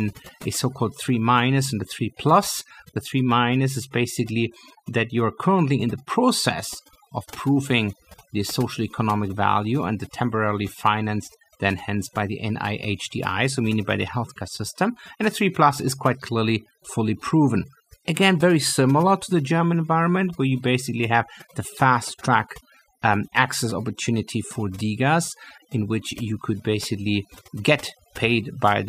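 A speech recording carries overdone noise removal from start to finish, the mark of a noise reduction stage pushed far too hard. Wherever individual frequency bands sank close to its noise estimate, it cut them deep or removed them, taking the softer parts of the voice along, while the pauses fall to near silence sprinkled with twinkling specks. On a spectrogram the gaps look almost black, dotted with isolated bright flecks.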